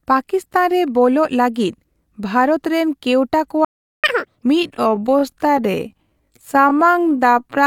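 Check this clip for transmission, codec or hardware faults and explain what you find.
Three faults affect this speech clip: a playback stall, a burst of catch-up at higher speed, and a time-stretched section running to the end.

From 3.65 to 4.04 s there is a playback stall. The sound cuts out mid-flow for 390 ms, then resumes. The likely cause is the player running out of buffered data or its playback thread being blocked, leaving the output silent until it recovered.

From 4.04 to 4.43 s there is catch-up at higher speed. The player resamples its backlog to recover the time lost in the stall, so playback runs at 2x speed. Resampling raises the pitch as well, by roughly ten semitones, giving a rushed, chipmunk-like sound.

From 4.55 s to the end there is a time-stretched section. The pace abruptly drops to 0.634x while the pitch stays normal, so the speech drags. This is likely software stretching the audio to fit a length, repeating short pieces to preserve pitch.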